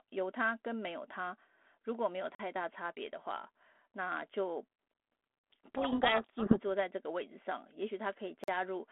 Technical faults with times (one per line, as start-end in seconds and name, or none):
2.35-2.39 gap between chunks
5.39-5.44 gap between chunks
5.75-6.62 codec payload misread
8.44-8.48 gap between chunks